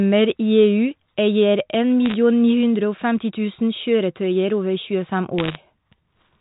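A speech clip carried over a G.711 telephone path, with its top cut off at 4 kHz, is hit by bit errors on a digital phone line from 2.06 to 2.14 s and again from 5.38 to 5.56 s. Flipped bits corrupt single samples, heard as sharp ticks and crackle, denser in the second burst (roughly one percent versus half a percent). They show as isolated vertical spikes in the waveform and thin full-band streaks on a spectrogram.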